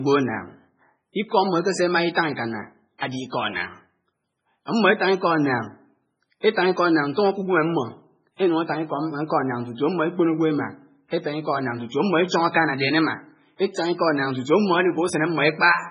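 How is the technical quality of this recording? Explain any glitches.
Technical quality is poor. Heavy lossy compression affects the whole clip, and there is one brief pre-echo.

Throughout, the speech sounds watery and swirly. Nothing reaches above about 10.4 kHz. This is likely MP3 compression at a very low bitrate, around 16 kbps. Starved of bits, the encoder cut the treble and dropped weak detail, which flickers between frames.

From 2.98 to 3.02 s, a short hiss arrives about 39 ms before a sharp attack. That attack sounds softened. This is pre-echo. The codec spread its coding noise across a whole block, so noise meant for the loud onset leaked into the quiet moment before it.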